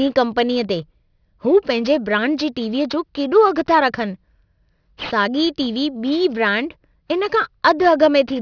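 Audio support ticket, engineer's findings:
Aliasing, throughout. Sibilants gritty, metallic. Spectrum runs hard up to 5.5 kHz. Folded components roughly 25 dB below speech. Fits a downsample to about 11 kHz with no anti-alias filter. Content above 5.5 kHz mirrors back as unrelated tones. Check resampler stage.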